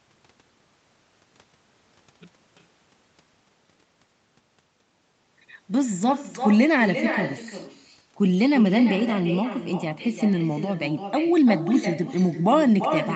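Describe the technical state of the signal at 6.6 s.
At 6.6 s the speech carries an echo with no canceller, present throughout: far-end loudspeaker pickup returns a thinner copy about 9 dB down, roughly a third of a second late.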